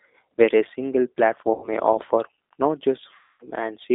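Throughout, the speech sounds narrow and slightly rough, with a faintly synthetic edge and nothing audible above about 3.7 kHz or below about 300 Hz. This is the G.729 codec, plainly audible here. At about 8 kbit/s, it does not carry the waveform itself. It rebuilds each 10 ms frame from a vocal-tract filter, a pitch predictor and a handful of pulses, and that coarse model is what gives the voice its roughness.

From 1.54 to 1.69 s, the sound smears into a brief stretched sound that sags in level and stays weak for a moment afterward. From 3.16 to 3.49 s, the same thing happens for longer: a stretched, fading sound, with distortion lingering as the signal returns. Both are VoIP packet loss concealed by the speech codec. About 90 ms went missing in the first gap, which fits three lost packets, and about 240 ms in the second, which fits eight. Across each gap, the decoder kept repeating its last pitch and filter at falling gain. 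Because every frame builds on the previous one, recovery lags after the packets resume.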